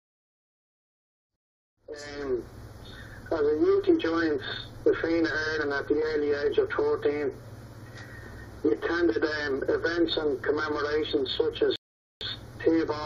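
Channel delay (comb filtering) runs throughout: one channel lags the other by a fraction of a millisecond, so the mono sum cancels at spaced frequencies from around 3 kHz upward, sounding hollow. Rebuffering stalls occur at 1.36–1.77 s and 11.76–12.21 s. Playback runs dry, drops to silence for about 0.41 s and 0.45 s, then resumes exactly where it stopped, adding time without losing sound.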